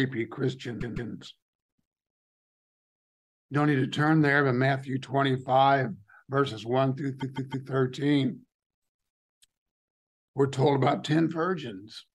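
A run of compressed frames was sent more than once, causing repeated frames: a 157 ms block replays twice at 0.80–1.11 s and three times at 7.20–7.67 s, stuttering.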